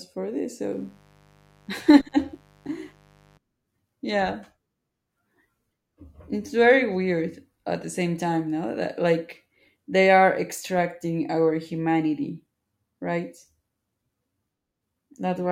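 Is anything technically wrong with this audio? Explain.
Yes. From 0.72 s to 3.38 s a mains buzz sits under the speech, roughly 35 dB below it. Its fundamental is 50 Hz, so the interference comes in at 100 pulses per second. Something like a dimmer, rectifier or unshielded cable is coupling sharp switching spikes into the signal path, and those spikes carry harmonics of 50 Hz well into the kilohertz range. The result is a steady, raspy buzz rather than a pure low hum, and it stops at 3.38 s.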